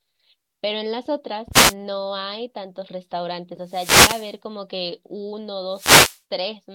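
The radio link from an analogue FM microphone fades three times as reflected signals cancel at the receiver, and each fade is a wireless microphone noise hit. As signal strength drops, receiver noise rises over the speech as a swish of static: briefly at 1.52 to 1.75 s, for about three quarters of a second at 3.64 to 4.37 s, and again at 5.70 to 6.21 s.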